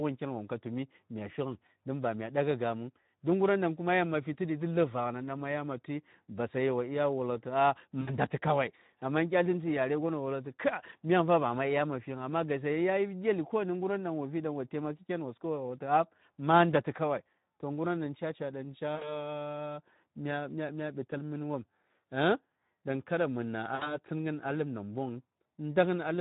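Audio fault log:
throughout: Speex codec. Starved CELP excitation leaves the speech plainly hoarse and noisy, which fits a bitrate near 11 kbps.
8.01–8.17 s, 18.95–19.17 s, 23.75–23.93 s: VoIP packet loss concealed by the speech codec. About 60 ms goes missing each time. The decoder stretches the last pitch and filter into a fading buzzy tone or coloured noise, and the sound stays weak briefly afterwards.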